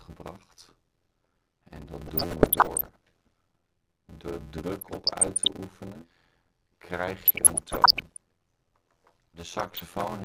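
Throughout, the audio carries a steady buzz at 86.1 Hz and runs at 0.625 of normal speed while keeping roughly its normal pitch. This is a block size mismatch (padded), consistent with 512-sample read blocks only partly filled and zero-padded. A waveform shows regular flat gaps, and a spectrogram shows evenly spaced vertical stripes. DAB burbling appears at 2.05–2.96 s, 4.79–5.50 s, 7.25–8.17 s and 9.59–10.04 s. Bit errors under one percent corrupted the MP2 data, and hits to individual sub-bands appear on a spectrogram as scattered short bright specks.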